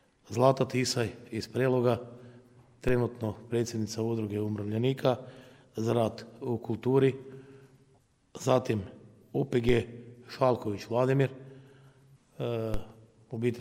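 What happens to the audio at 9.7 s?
A single low thump lands at 9.69 s, a click with weight below it, while the sound carries on unchanged on either side. It is a DC step: the waveform's zero line jumps abruptly by about -20 dBFS, the kind of shift a converter recalibrating or an offset input being switched in would cause. The offset does not hold. It drains away as a 5 Hz high-pass pulls the baseline back to centre.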